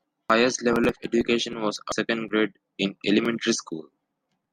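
At 0.30 s, just before "level of education was", and again at 1.92 s, right after it, damaged data in a compressed stream makes the decoder lose sync, leaving a brief glitch in the speech.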